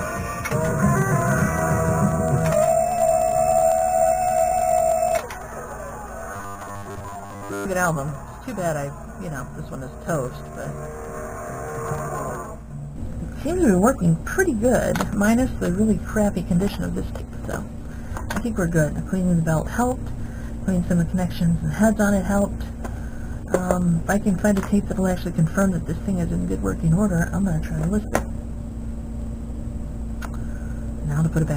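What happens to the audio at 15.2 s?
Nothing happens at 15.2 s; the audio there runs on intact, with no dropout, glitch or other fault.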